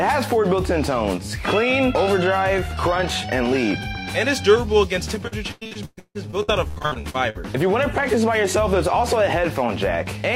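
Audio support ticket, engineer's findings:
Choppy, robotic stretch from 5.27 to 7.37 s, with repeated packet loss on the network path. Frequent dropouts, longest about 0.16 s, each patched by stretching the last sound, so roughly 40% of that span is concealment rather than real audio.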